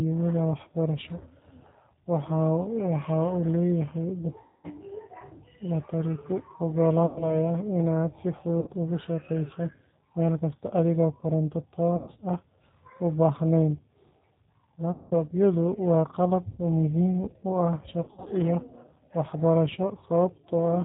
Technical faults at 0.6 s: G.729 codec

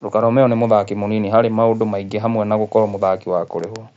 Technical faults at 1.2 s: none

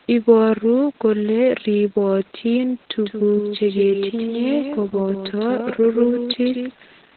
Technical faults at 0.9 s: Opus voice compression

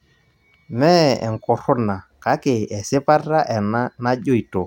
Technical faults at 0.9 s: none

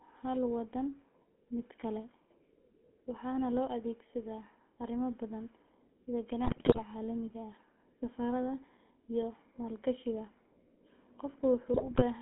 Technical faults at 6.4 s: GSM full-rate codec; GSM bit errors

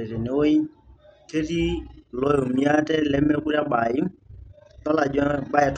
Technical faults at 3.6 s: overlap-add ripple

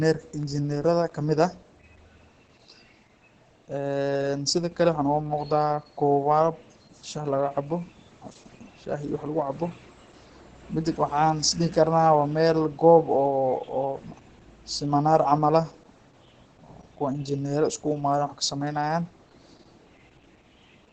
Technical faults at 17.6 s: Opus voice compression

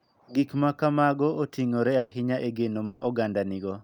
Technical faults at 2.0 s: burst of packet loss

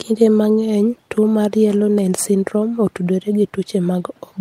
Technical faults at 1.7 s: none

